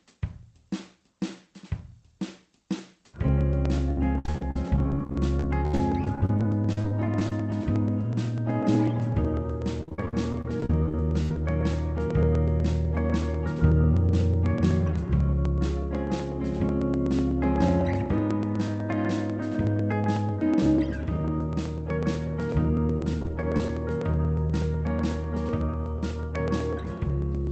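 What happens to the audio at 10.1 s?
At 10.1 s the audio is inside a stretch of repeated packet loss (robotic sound) running from 9.81 to 11.36 s. Packets keep going missing or arriving too late, and each hole is covered by stretching out the sound that came just before it. The holes come in quick succession, the longest about 70 ms, and roughly a quarter of the stretch is patched this way. The result is choppy, with fragments of the sound gone.

Underneath this, periodic USB or driver dropouts run through the whole clip from 0.06 s onward. Every 0.124 s, about eight times a second, something stalls the audio path and a tiny slice of signal is skipped outright rather than filled. Each skip is heard as a small regular tick or pop wherever there is sound. These ticks sit on top of the choppy concealment, all within the narrowed, band-limited sound of the Opus call path.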